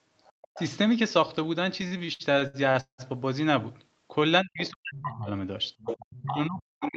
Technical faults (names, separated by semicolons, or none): other side's voice leaking through; speech suppressed in double talk; repeated stalls (stutter)